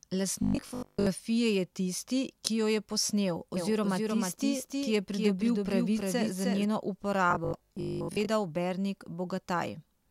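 From 0.43 to 1.07 s the speech breaks into robotic sound from repeated short buffers, ending just before "je tisti ki jo". The likely cause is audio arriving too seldom, so the playback side keeps recycling the last block while most of the real signal is skipped. The buzz sits at 50 Hz, which fits a 20 ms buffer being repeated, and it lays a rigid metallic tone over the speech that only loosely tracks its shape.

Right after "ki jo je posnel", from 3.57 to 6.65 s, a doubled audio track appears: a second full-band copy trails the original by roughly 300 ms at about 5 dB lower. This is likely the same signal arriving again through a slower path. The copy has no reverberant tail or room colouring and cuts in and out abruptly at both ends, giving a flat, clipped echo.

From 7.31 to 8.29 s the repeated-buffer robotic sound returns with the same 50 Hz buzz. This time about half of the audio is replaced by repeats, so the metallic drone is somewhat less dense than in the first episode.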